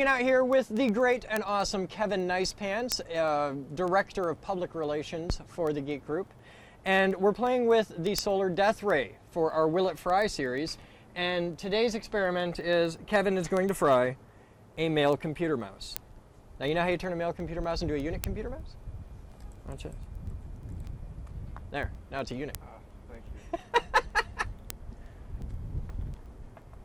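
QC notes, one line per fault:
0.17–26.74 s, word clock ticks: receiver clock runs about 200 ppm off the sender's, slipping one sample every 0.1 s as steady sharp ticks; spectrogram shows evenly spaced thin vertical lines.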